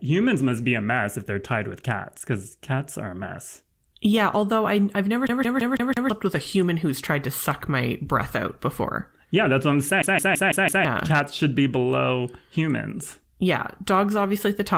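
At 5.27 s, right after "I I've never", the audio catches like a CD stuck on one turn: a 166 ms slice repeats five times with small mutes at each jump until 6.10 s, picking up at "with a human who's". It does it again from 10.02 to 10.85 s, just after "that's what I'm", the same stutter with the same loop length, five passes. Underneath, the Opus voice coding stays light and reaches up to about 20.4 kHz.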